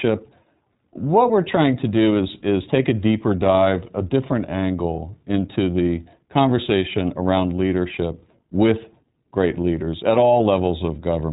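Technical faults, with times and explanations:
Throughout, iLBC codec. The speech has no content above 3.8 kHz, so it sounds narrow and muffled, like a phone line. The damage is plainly audible. The speech has a slightly rough, synthetic edge. The coder rebuilds each short block of the signal on its own, without using the previous block. It works in 20 ms frames at a rate near 15 kbps.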